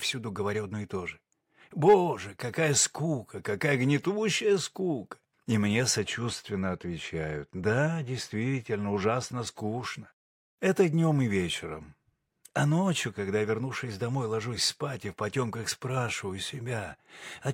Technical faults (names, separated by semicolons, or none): de-emphasis applied wrongly